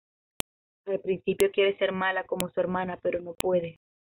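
You get a sharp, loud click at 0.40, 1.40, 2.40 and 3.41 s, one per second. That's a file header played as audio: the sound was joined from 1-second WAV pieces without stripping headers, so each piece opens with header bytes snapping out as samples.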